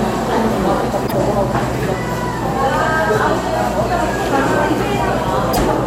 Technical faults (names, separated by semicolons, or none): damaged data in a compressed stream